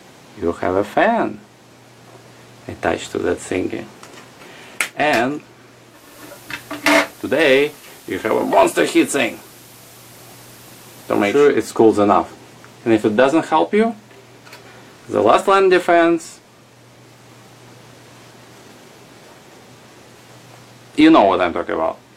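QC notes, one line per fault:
5.87 to 11.55 s: digital radio blending to analogue. The receiver lost its digital stream and cross-faded to the FM broadcast over about 0.37 s, then back. Hiss rises to roughly 25 dB below the signal. Level stays the same.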